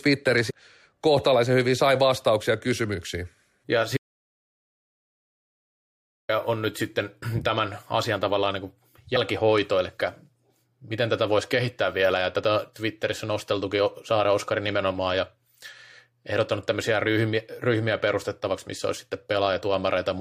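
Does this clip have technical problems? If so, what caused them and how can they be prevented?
Yes. Damaged data in a compressed stream produces two brief glitches, at 0.49 to 0.51 s and 9.15 to 9.17 s, where the decoder misreads corrupted frames and resyncs. Checksummed, error-protected storage and transport prevents it.

An audio dropout to silence runs from 3.97 to 6.29 s, losing about 2.3 s of speech to silence with no room tone. The waveform is a near-flat line and the spectrogram is blank. The likely cause is a lost input device or link. Secure connections and monitoring input levels during recording prevent it.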